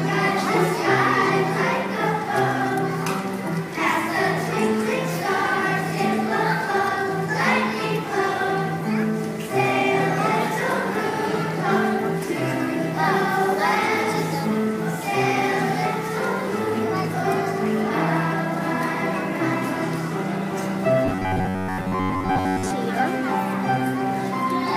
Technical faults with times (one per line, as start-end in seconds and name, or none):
21.05-22.71 robotic sound from repeated short buffers